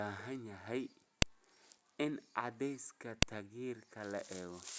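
A speech recording with a file header played as audio, twice: there's a sharp, loud snap at 1.22 s and another at 3.22 s, each lasting only a couple of milliseconds. They land exactly 2.0 s apart, which points to the audio being streamed or stitched together in 2-second pieces with each WAV header left in. Those few dozen header bytes get read as samples, so you hear a click at every join regardless of what the speech is doing.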